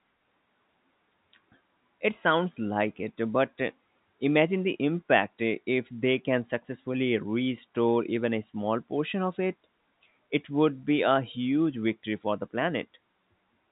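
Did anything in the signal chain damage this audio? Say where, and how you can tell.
No, nothing in the signal chain damaged this audio.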